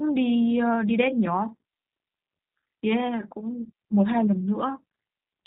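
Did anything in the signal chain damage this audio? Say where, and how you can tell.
Yes: the G.729 codec damaged it at the codec stage. Across the whole speech clip, nothing above 4 kHz survives, and the rough, synthetic quality fits 8 kbit/s rebuilding from filter and pulses.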